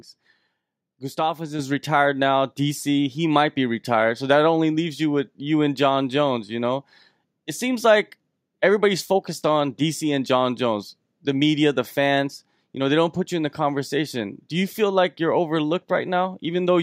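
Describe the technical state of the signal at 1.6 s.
At 1.6 s the whole signal jumps up in loudness at once, just before "retired now": the speech and the background noise behind it both become about 6 dB louder in a single step and stay there. This is a microphone volume stepped up event. The call software judged the microphone input too quiet and raised the device's input volume in one move rather than gradually, so everything captured from that instant on arrives at the higher level.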